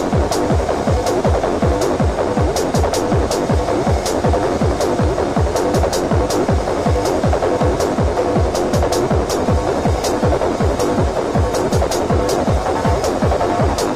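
From 9.3 s to the end, a call bitrate drop makes the sound coarse, muffled and dull, consistent with an encoder forced to about 18 kbps. Unlike packet loss, nothing drops out.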